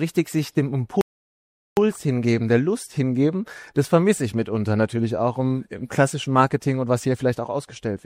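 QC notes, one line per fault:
1.01 to 1.77 s, playback stall: the output drops to silence partway through the sound and stays silent for about 0.76 s before the audio returns. The break is abrupt on both edges, with no fade, which is characteristic of a player that stops delivering samples rather than a quiet passage in the source. The likely cause is the playback buffer running dry, or the audio thread being blocked, until the player recovered and resumed output.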